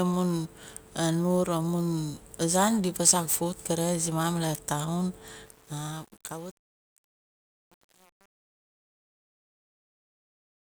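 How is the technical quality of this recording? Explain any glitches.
The recording has one clear fault, in its second half. From 5.46 s to 10.64 s there is truncation distortion on a fade. As the smooth fade-out starting around 5.5 s lowers the level, the gain stage drops bits without dither, which fits an 8-bit word. The waveform collapses into coarse square steps, so the decaying speech turns gritty toward 10.6 s.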